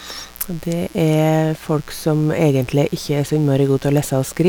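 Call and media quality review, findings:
Mains buzz, 60 Hz, present throughout the speech clip. Steady raspy buzz sitting under the voice at roughly 25 dB below signal. Probable component: dimmer, rectifier or unshielded cable admitting switching spikes twice per cycle. The spikes carry 60 Hz harmonics well up into the kHz range, which is why it rasps rather than hums. Distinct from plain hum: a pure low tone, no bright edge. Distinct from noise: pitched and periodic, not hiss.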